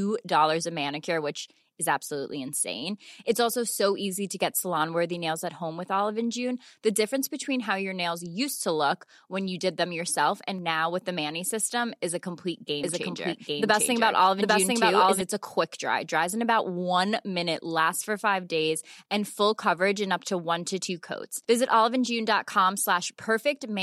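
Right after "system is a complete", from 12.84 to 15.22 s, there's a doubled audio track: a second copy, about as loud, trailing roughly 0.7 s behind, likely from a slower capture path, until "a quick dry".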